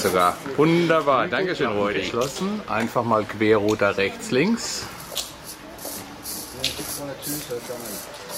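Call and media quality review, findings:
Nothing to flag here; the audio came through without any problems worth noting.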